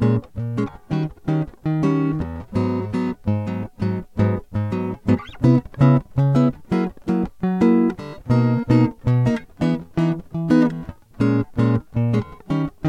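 No technical faults can be heard anywhere in this music clip.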